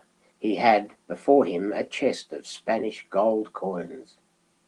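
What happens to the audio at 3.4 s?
Nothing goes wrong at 3.4 s: the speech there comes through intact, carried by Opus voice compression at 24 kbps in its full-band hybrid mode, with no dropout, click or distortion at that moment.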